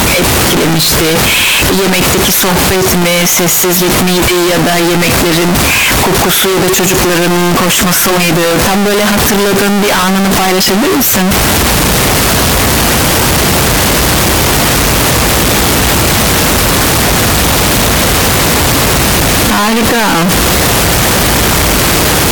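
From start to finish the speech is buried under a loud, harsh distortion, and the quiet bits between phrases come through just as loud as the talking. That's the classic sign of signed and unsigned mixed up, likely a decoding slip where 16-bit samples got read with the top bit flipped. Every time the waveform crosses zero it jumps across the whole range, so the loudness stays pinned and the gaps never fall silent.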